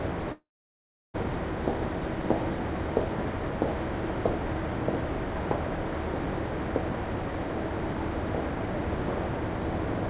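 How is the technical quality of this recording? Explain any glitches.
One glitch stands out, over a path band-limited to 4 kHz by G.711 mu-law coding. From 0.32 to 1.16 s, a long network dropout is likely: about 0.8 s is lost, the receiver stretches the last sound briefly, then leaves silence until audio resumes.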